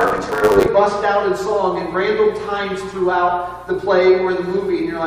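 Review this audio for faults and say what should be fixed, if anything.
Block size mismatch (truncated) from 0.0 to 0.69 s: each block is written longer than the next stage reads, so the tail of every block is discarded. This produces a 100 Hz buzz and audio running 1.16 times fast at near-normal pitch, which fits 512-sample blocks being cut short. To prevent it, make every stage agree on one block size, or buffer between stages so no samples are dropped.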